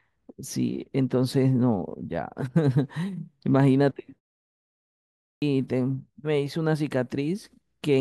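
At 5.26 s the speech resumes abruptly after a 1.14 s pause. About 160 ms of its opening sounds are missing. This is a clipped start after a pause: the output device slept through the silence and woke too late.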